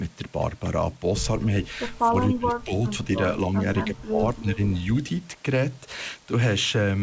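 From 2.09 to 2.87 s, the speech sinks, falling by around 20 dB at its deepest. It happens again from 3.86 to 4.61 s, with a shallower dip of around 15 dB. Both fit speech suppressed in double talk. The likely cause is the far side talking at the same moment. The echo canceller then mistook this talker for loudspeaker echo and turned the speech down along with it.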